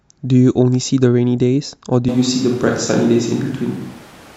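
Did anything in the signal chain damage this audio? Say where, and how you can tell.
Yes. From 2.09 s to the end the sound turns suddenly roomy and bass-light at an unchanged level, likely a switch to a distant microphone at capture.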